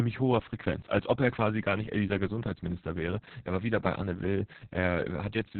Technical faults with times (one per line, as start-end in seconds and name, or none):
0.00-5.59 Opus voice compression